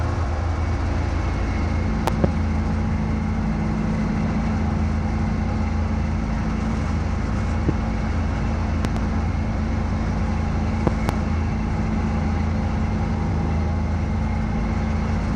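A sudden voltage pulse, likely from a plug, switch or static discharge, enters the signal path, producing loud pops at 2.07–2.27 s, 7.69–7.71 s, 8.85–8.99 s and 10.87–11.12 s. Each is a double pop except the single one at 7.69 s. They rise about 20 dB above the sound (about 15 dB for the single), which continues underneath.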